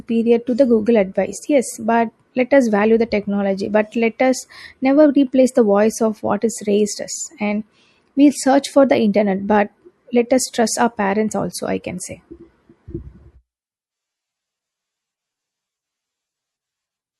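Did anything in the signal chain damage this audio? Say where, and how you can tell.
Yes. The damage sits at the codec stage and runs through the whole speech clip. The sound has a watery, swirling texture, with metallic chirps on the s sounds and softened consonant onsets. The likely cause is MP3 compression at a bitrate around 64 kbps. Starved of bits, the encoder drops weak frequency lines, which flicker on and off from frame to frame.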